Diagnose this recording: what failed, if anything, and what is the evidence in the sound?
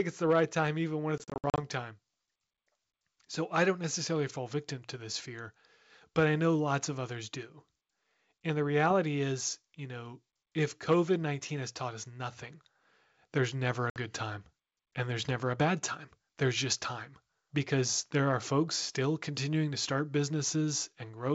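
Network stage: packet loss on an ADPCM call, over the G.722 link. Right after "right time even when", 1.18–1.59 s loses about 220 ms in hard-edged gaps (longest 60 ms, roughly ten packets). A 60 ms hole follows "there's never" at 13.90 s. Dropped packets become silence, and the decoder's predictor and step size drift from the sender's until they resync.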